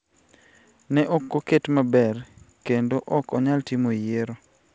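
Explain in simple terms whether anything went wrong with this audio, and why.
At 1.22 to 1.31 s one sound drags on briefly with a faint buzz or dip. This is a short stall from a late packet: the call held that sound about 68 ms until the packet arrived, so nothing was lost.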